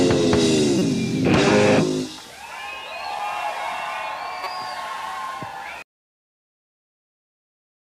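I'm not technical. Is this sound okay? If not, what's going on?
No. There is a corrupt frame decoded at 0.79 to 0.82 seconds, and another at 4.44 to 4.47 seconds. The audio is stored in small compressed chunks. In each spot, a couple of chunks got damaged, and the player played them anyway, putting sound at the wrong pitches for a split second. You hear a short chirp or blip. The first one is clearly louder and more noticeable than the second.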